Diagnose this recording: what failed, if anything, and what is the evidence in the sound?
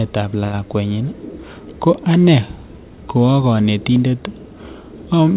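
Network and jitter buffer stage: a short stall from a late packet at 0.44 to 0.68 s. The buffer ran dry, so the last sound was stretched by about 88 ms, then resumed where it left off with nothing lost. A spectrogram shows flat, held harmonics below the 4 kHz ceiling, with a slight buzz or dip in the waveform.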